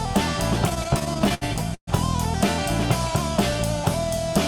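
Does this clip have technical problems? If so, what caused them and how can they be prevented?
Yes: repeated stalls (stutter) from 0.69 to 1.89 s, where late packets kept draining the jitter buffer. There are 14 hiccups, the longest 127 ms, stretched out with repeated, fading sound, so it drags without losing anything. A deeper adaptive jitter buffer or a steadier network path would prevent it.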